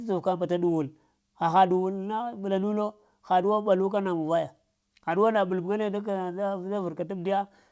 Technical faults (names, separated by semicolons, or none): none